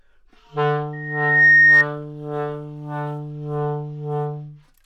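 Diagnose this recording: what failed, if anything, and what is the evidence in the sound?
The acoustic loop between a loudspeaker and the microphone feeding it closed, and at 1.8 kHz the loop gain passed unity: a loudspeaker feedback squeal in the analogue playback path. A pure tone appears at 0.93 s, swells over roughly half a second to something like 15 dB above the rest of the sound, and holds until it cuts off at 1.86 s. The single fixed pitch rising by itself, independent of the material, is the mark of regenerative feedback rather than a signal in the source.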